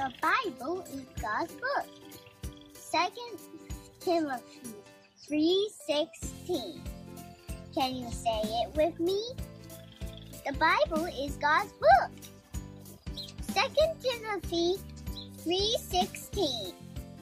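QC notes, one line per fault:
No technical faults are audible anywhere in the signal.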